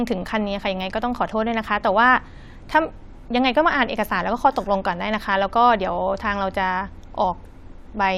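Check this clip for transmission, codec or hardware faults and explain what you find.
No transmission, codec or hardware fault is audible anywhere in the speech.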